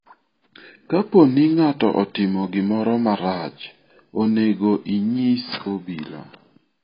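From start to finish the speech sounds dull and smeared, with nothing at all above 5 kHz and a watery, warbling fizz on the sibilants and held sounds. That's most likely AAC compression, AAC-LC pushed hard. The encoder is starved of bits, which fits a bitrate around 16 kbps, so it lops off the top of the spectrum, quantises what's left very coarsely, and leaves gaps that shift from frame to frame. Those gaps are the swirly texture you hear.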